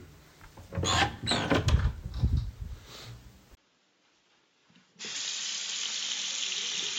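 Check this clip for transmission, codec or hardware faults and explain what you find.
One fault: an input switched to a poorer device at 3.55 s. A gap of 20 ms comes first. The sound then drops by roughly 10 dB and loses everything above 7.3 kHz, turning dull. A new noise floor sits roughly 40 dB down. A likely device change narrowed the band.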